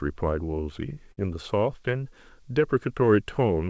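At 1.12 to 1.19 s comes a burst of packet loss. The receiver filled about 52 ms by extending and fading the last sound, heard as a brief fading continuation, then jumped ahead with 60 ms skipped. A spectrogram shows the last sound's spectrum frozen and dimming, and the waveform shrinks. Throughout the clip nothing appears above 8 kHz, which fits the call path's G.722 codec at 64 kbps.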